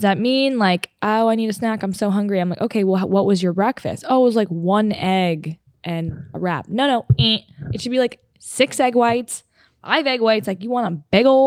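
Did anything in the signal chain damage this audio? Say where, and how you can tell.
No, nothing in the chain audibly damaged this speech recording at any stage.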